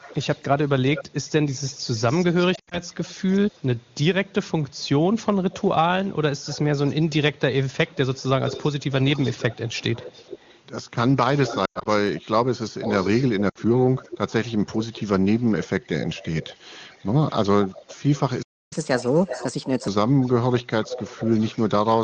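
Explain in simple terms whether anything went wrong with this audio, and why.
Echo leak, from 0 to 10.61 s and again from 11.35 to 21.69 s: a delayed copy of the speech trails it by about 0.42 to 0.43 s. It is faint at first and louder in the second stretch, likely because a loudspeaker's sound reached the far microphone and wasn't fully cancelled.

Lost AMR speech frames, at 2.55 to 2.79 s, 11.65 to 11.88 s and 13.49 to 13.58 s: radio errors spoiled small pieces of speech. The phone filled each gap by stretching the last good sound while fading it, so the speech briefly warbles or dips.

Playback stall at 18.42 s: the sound stops mid-flow for about 0.29 s. This is likely because the player ran out of audio data or was held up, so it went silent until more audio arrived.

Catch-up at higher speed, from 18.73 to 19.88 s: to regain the time lost in the stall, the player runs 1.25 times faster. 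The pitch rises by roughly four semitones, sounding chipmunk-like, and then settles back to normal.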